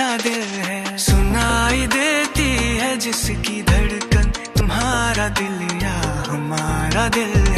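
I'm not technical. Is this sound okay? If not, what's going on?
No. At 4.6 s there's a brief smeared blip and the sound jumps slightly ahead. This is compressed frames skipped: a few chunks of the compressed file, most likely damaged or missing, weren't played, so roughly 70 milliseconds of audio went missing.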